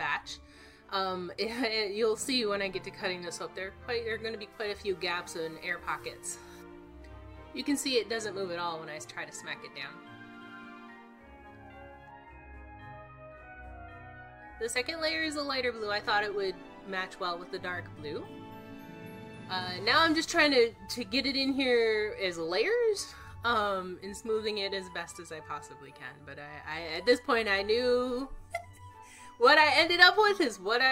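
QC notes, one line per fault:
3.22 s, damaged data in a compressed stream: a brief glitch where corrupted bytes make the decoder misread a frame, lose sync and hunt for the next header. A spectrogram shows a thin broadband vertical streak, and the waveform shows an abrupt discontinuity.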